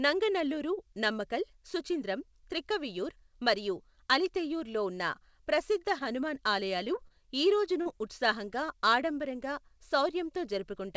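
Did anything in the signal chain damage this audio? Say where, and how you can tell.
Yes. Two kinds of damage occur at the network and jitter-buffer stage of the call path. The G.722 link is audible as its usual coding noise and ceiling, with nothing above 8 kHz.

Short concealed packet loss occurs twice, at 5.99 to 6.02 s and at 7.82 to 7.87 s. About 20 ms of sound is lost at the first and about 40 ms at the second. The decoder filled each gap by extending the preceding sound, so you hear a brief smear rather than silence. On a spectrogram the filled stretch runs on unnaturally flat and smooth, then blends back into the real signal. The waveform shows a continuation of the last sound in place of changing detail.

A short stall from a late packet occurs at 7.07 to 7.15 s. A packet arrived late, the jitter buffer ran dry, and the receiver held the last sound for about 26 ms until it came, then resumed at the same point. 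Nothing audible is dropped, but one sound lingers too long with a faint buzzy dip. On the waveform this appears as a stretched continuation of the last sound. The spectrogram shows a frozen, slightly dimmed band before normal motion returns.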